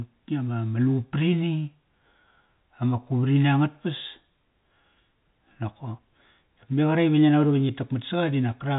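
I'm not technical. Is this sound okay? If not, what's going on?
Yes, nothing here is wrong with the recording. The speech has the narrow, slightly boxy tone of an ordinary landline call, because G.711 telephone coding keeps only the lower part of the sound and leaves out the higher, brighter frequencies.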